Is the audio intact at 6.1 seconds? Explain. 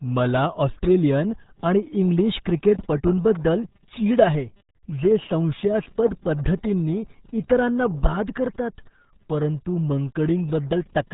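No. At 6.1 seconds, as throughout the clip, the speech carries RealAudio 14.4 codec damage. This early dial-up speech coder squeezes the signal into a tiny data budget, which fits roughly 8 kbit/s, so it discards everything above about 3.8 kHz and coarsely rebuilds what remains. The damage is heavy: the speech sounds muffled and dull, with a gargly, bubbling roughness where the coder struggles to track the changing sound.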